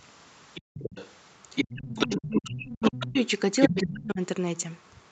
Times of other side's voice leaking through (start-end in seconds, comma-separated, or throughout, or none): 0.54-1.09, 1.55-3.23, 3.62-3.91